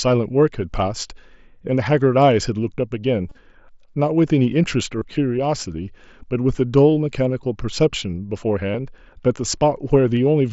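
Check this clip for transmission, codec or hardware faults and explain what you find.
Concealed Bluetooth headset packet loss occurs at 3.29 to 3.38 s, 4.99 to 5.02 s, 7.29 s, 8.72 to 8.74 s, and 10.17 s. Lost headset packets were filled by repeating the best-matching recent waveform, so runs of lost packets become a brief buzzy hold rather than the silent hole of an uncovered dropout, while the single loss at 10.17 s is nearly hidden. The 3.29 s event is the roughest, with losses scattered over 90 ms. The mSBC wideband link passes speech up to 8 kHz.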